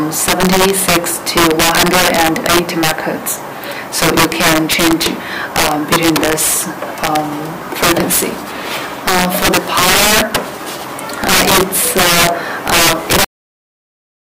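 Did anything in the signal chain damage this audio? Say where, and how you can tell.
Yes. There's integer overflow throughout, probably in a gain or format-conversion stage: about 11 dB of overdrive wraps a small fraction of peaks to the opposite sign, giving sharp cracks.

The ending is a cut-off end. At 13.25 s the sound stops mid-event and drops straight to digital silence with no decay, so the final buffers were never written.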